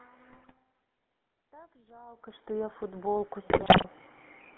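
Throughout, the speech carries the GSM full-rate codec's buzzy, gravelly roughness. The codec rebuilds the voice from a vocal-tract model driven by sparse pulses. The sound fits the 13 kbps full-rate codec. The band runs only from about 200 Hz to 3.4 kHz.

From 0.32 to 0.58 s, GSM bit errors break the voice into squawks and gargling. Corrupted filter, pitch and gain values reach the decoder. Each damaged frame gets a bent spectrum or a sudden jump in level.

From 1.51 to 4.01 s, the automatic gain is rising. The input level at the microphone has dropped by about 20 dB, partly as the talker moves back. The gain control slowly adds about 11 dB. Voice and room noise swell together.

From 3.50 to 3.85 s, GSM bit errors return and are harsher. The error rate is higher here, at 3.14 percent. More frames break up, and the speech turns to pops, squawks and gargling bursts.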